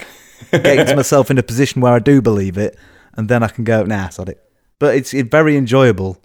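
Listening to this speech recording, nothing stood out as a technical problem at any point.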